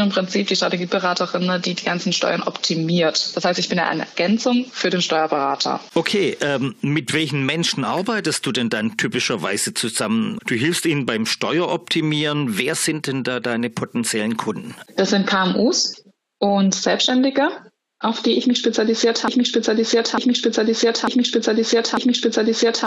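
From 19.28 s to the end, a 0.90 s fragment repeats four times as a broken-record loop, likely from a stalled player or stream, showing identical repeating blocks on the waveform and spectrogram.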